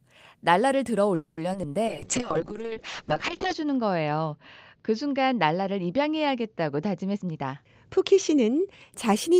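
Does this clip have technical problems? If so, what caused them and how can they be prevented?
Yes. From 1.15 to 1.39 s the sound stretches into a fading buzz, a call audio freeze. It was likely caused by packets stalling in transit until the jitter buffer ran dry. About 220 ms was filled in, and nothing was lost. Playback then resumed 220 ms late. Steadier network routing and a deeper jitter buffer prevent this.

Short concealed packet loss occurs at 1.53 to 1.56 s and at 1.62 to 1.65 s. Each time, a few hundredths of a second failed to reach the decoder. The receiver patched the hole by extending the preceding sound, which leaves a brief smear. Forward error correction prevents this.

From 1.88 to 8.98 s there is a call bitrate drop. The bandwidth estimate fell, which points to the encoder going from around 32 kbps to about 6 kbps. The top end falls from 20 kHz to 8 kHz, so the audio turns muffled and rough. 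The lowest rate holds for 1.63 s. Reducing competing traffic on the link prevents this.

From 7.14 to 8.13 s a jitter buffer speed-up runs the audio at 122% of normal speed, at unchanged pitch. The buffer had built up too much delay. To catch up, it cut out small pitch-period pieces, roughly a fifth of a second in total. Avoiding bursty packet delivery prevents this.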